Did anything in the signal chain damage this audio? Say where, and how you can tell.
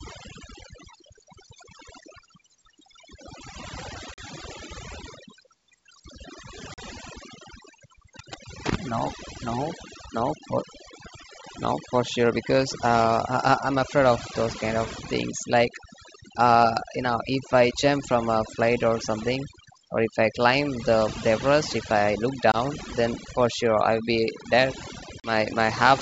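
Yes. At the call-processing stage, overdone noise removal runs through the whole speech clip. The background drops and breaks up into twinkling specks. The suppressor is cutting individual frequency bands it judges to be noise, and quiet speech components go with them.

At the network stage there is packet loss on the ADPCM call, heard as hard-edged silent holes at 4.14, 6.74 and 25.20 s, each 40 ms, and at 22.52 s, 20 ms. Each fits one or two lost packets. The decoder's predictor and step size drift from the sender's, so speech resumes slightly distorted before settling. The G.722 wideband coding itself, consistent with 64 kbit/s, adds little audible damage.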